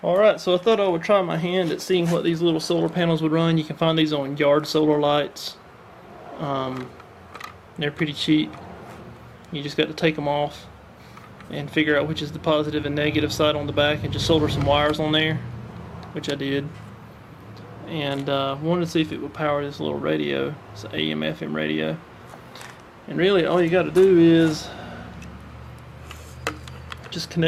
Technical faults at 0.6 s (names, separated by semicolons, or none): none